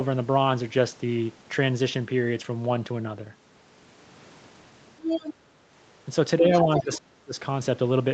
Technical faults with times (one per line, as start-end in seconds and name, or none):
5.05-5.34 other side's voice leaking through
6.38-7.38 speech suppressed in double talk
6.54-7.00 other side's voice leaking through